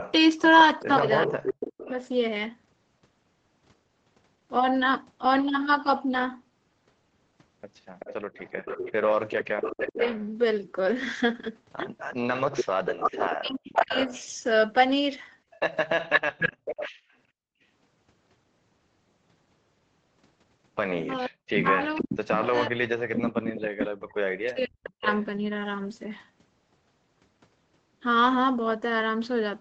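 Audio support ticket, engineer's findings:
Echo leak, 0.0–1.9 s, 7.99–17.13 s, 21.54–25.25 s. Delayed copy of the speech returning at 383 ms, then 482 ms in the last stretch, at about 10 dB, 5 dB, and 10 dB below the speech. Likely a speakerphone echo canceller passing residual loudspeaker pickup back down the line.

Speech suppressed in double talk, 0.8–1.9 s, 9.89–14.1 s, 21.27–25.06 s. Talker dips by as much as about 40 dB while the echo overlaps: roughly half a second, about a second, and about three seconds affected in total. Likely the canceller failing to separate near talker from echo and attenuating both.

Background gated by the echo canceller, 16.52–17.63 s. Room sound drops out by about 40 dB for roughly 0.7 s in total, right as the second echo stretch ends, then returns. The canceller clamps the microphone during loudspeaker playback and releases it afterwards.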